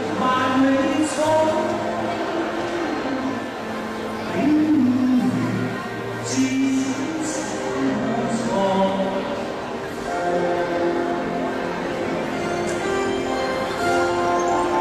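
From 3.27 s to 6.89 s there is digital radio blending to analogue: the digital stream is lost and a 0.49 s cross-fade switches to the station's FM broadcast, then back. Hiss rises, though well below the programme, and the level dips about 1 dB.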